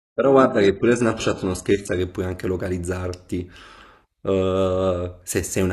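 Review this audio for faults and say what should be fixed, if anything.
From 0.0 to 2.0 s the speech has no content above 11.5 kHz and stronger codec artefacts. This points to an adaptive stream starting at a low bitrate, near 12 kbit/s HE-AAC, before switching without a gap to about 96 kbit/s AAC-LC. To prevent it, start playback on a mid-tier rendition or use a faster bandwidth estimate so the first segments are not fetched at the lowest bitrate.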